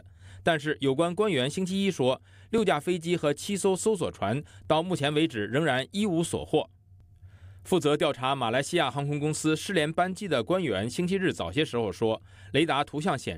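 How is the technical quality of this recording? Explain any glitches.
Two brief glitches, at 2.58 s and 4.65 s, are each a repeated buffer. Late data made the device replay a piece about 10.7 ms long (consistent with a 512-sample buffer) once more, heard as a click or brief buzz. Unlike a dropout, nothing goes silent.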